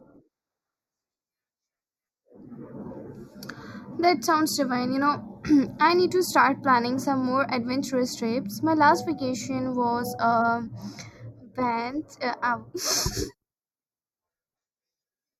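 Speech with channel delay (comb filtering) throughout: one channel lags by a fraction of a millisecond, so mono summing leaves evenly spaced notches from around 3 kHz, sounding hollow and phasey rather than simply muffled.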